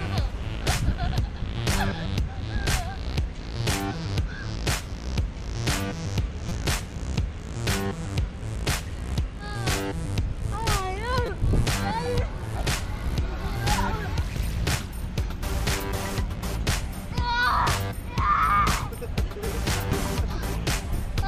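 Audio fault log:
1.72 s, 6.49–6.51 s and 11.26–11.29 s: repeated buffer. New audio arrived late, so the last 5.8 ms piece replayed, which fits a 256-sample buffer. It sounds twice at 1.72 s and five times at the others. The hard joins give a click, then brief buzzes.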